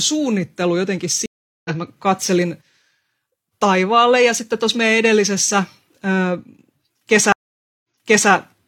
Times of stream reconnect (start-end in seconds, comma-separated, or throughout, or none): 1.26-1.70, 7.32-8.31